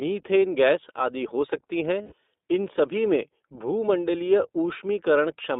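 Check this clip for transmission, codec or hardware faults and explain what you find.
The recording has two faults: iLBC codec coding throughout, and lost iLBC frames at two points.

The iLBC codec runs for the whole clip. The speech is confined to a telephone band of roughly 250 Hz to 3.7 kHz. Each 20 ms frame's excitation is coded on its own, which fits iLBC's 15.2 kbps mode. The damage is plainly audible: a slightly rough, synthetic edge on the speech. On a spectrogram, energy stops sharply near 3.7 kHz and thins below 250 Hz.

The lost iLBC frames occur at 0.41 s and from 2.02 to 2.14 s. At each gap the decoder has no data, so it repeats the last pitch cycle mixed with noise and fades it as the loss continues. The first gap fits one lost 20 ms frame. The second lasts about 100 ms and sounds like a held, buzzy or breathy vowel. Because iLBC frames stand alone, the speech recovers at once afterwards. 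On a waveform, each gap shows a regular, repeating cycle, which decays over the longer gap. On a spectrogram, it shows flat, unchanging harmonics.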